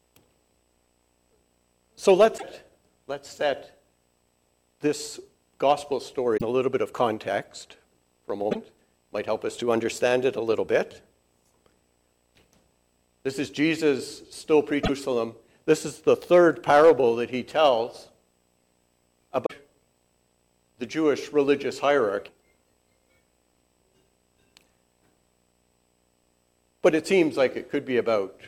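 Hard clipping first appears at 2.08 to 2.25 s. Peaks are driven about 3 dB past full scale and cut flat. This adds a brief crackle. At 2.37 to 2.44 s, a short glitch follows, with the sound jumping forward. The likely cause is a broken MP3 bit reservoir. Frames were lost, and the next frames read borrowed bytes from the wrong place. The length fits two or three 26 ms frames. Clipping returns at 5.68 to 5.72 s, about 2 dB over. The same glitches recur at 6.36 to 6.42 s and 8.50 to 8.56 s. Another comes at 14.83 to 14.90 s. The longest clipping runs from 16.09 to 16.91 s, about 4 dB over. A final clipped crackle comes at 17.65 to 17.68 s. The last two glitches fall at 19.45 to 19.52 s and 22.27 to 22.30 s.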